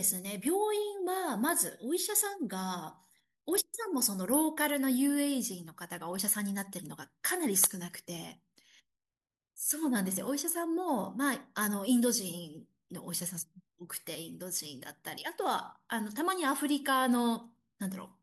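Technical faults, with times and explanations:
6.19 s and 10.17 s, audio missing between chunks: the speech skips abruptly twice, about 20 ms lost each time, likely from gaps where 4-second processing chunks join.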